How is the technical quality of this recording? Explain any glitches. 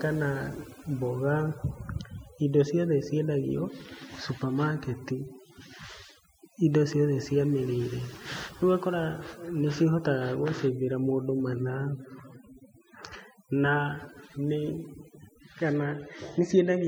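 The main problem is overdone noise removal, present for the whole recording. A noise reduction stage was set too aggressively. It pushes frequency bands near the noise level far down or off, taking quiet parts of the speech with them. The background drops and breaks up into twinkling specks.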